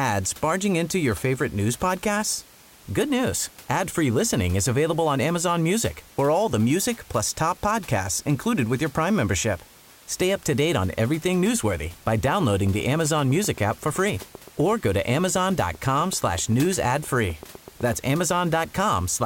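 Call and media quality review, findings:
Train of clicks, 12.41–18.07 s: regular ticking, 7.8 per second, about fifty pulses near speech level. Likely interference or a faulty connection or power supply.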